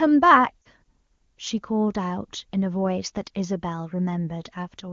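A short speech clip over AMR wideband, with a brief dropout of lost AMR speech frames at 0.62 to 0.68 s. About 40 ms went missing, which fits two 20 ms frames, so the decoder bridged the gap by stretching and fading the last good sound before speech resumed.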